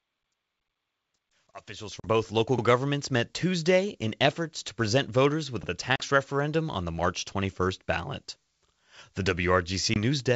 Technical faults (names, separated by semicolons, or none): packet loss on an ADPCM call; overlapping chunks